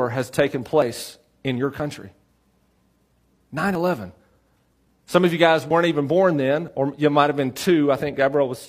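At 0.82 s and again at 1.80 s, just after "in your", the speech skips forward by roughly 20 ms with no gap of silence, the two sides butted straight together. This is audio missing between chunks: the repeats fall about 1 s apart, which likely points to a processor losing a sliver each time it hands over from one block to the next.

Between 3.32 and 3.37 s comes a different jump, compressed frames skipped. The speech leaps ahead by about 150 ms, which fits three lost frames of about 46 ms each.

The chunk-boundary skips then resume at 3.75 s, at 5.71 s between "of you guys" and "even born then or", and at 6.68 s between "even born then" and "or you might have". Each is short, abrupt and on the same roughly one-second grid, unlike the single longer frame jump.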